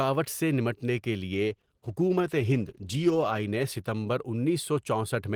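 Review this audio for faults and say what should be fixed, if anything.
Right after "سے نمٹنے کے", at 1.34 s, the speech goes coarse and loses its top end, staying that way until about 4.35 s. That's a call bitrate drop. The bandwidth estimate fell, so the encoder was pushed to spend far fewer bits, quantising more roughly and trimming the highs. The muffled, watery stretch fits a fall from roughly 32 kbps to around 13 kbps, with the worst of it lasting about 1.94 s. To prevent it, tune the congestion control to back off more gently and hold a higher minimum bitrate for speech.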